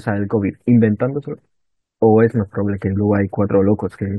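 Listening to this speech recording, nothing technical stood out at any point.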